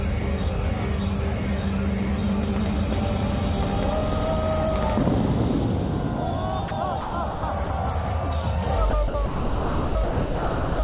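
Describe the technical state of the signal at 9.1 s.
At 9.1 s the sound drops out briefly, from 9.08 to 9.14 s. For those 60 ms it gives way to a steady, featureless noise bed, then returns. This is most likely sound dropped by the voice detector. The sender judged the signal to be background and stopped transmitting. The receiver filled the gap with generated comfort noise. The filler, like the surrounding audio, has nothing above 4 kHz, which fits a narrowband telephone codec.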